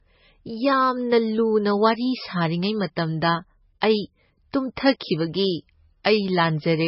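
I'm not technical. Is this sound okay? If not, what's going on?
No, not quite. The whole recording sounds dull and watery, with everything above about 5.6 kHz gone, which is likely heavy MP3 compression squeezing the file too hard. At 6.04 s there's pre-echo: a short hiss sneaks in about 11 ms before a sharp sound, blurring its start.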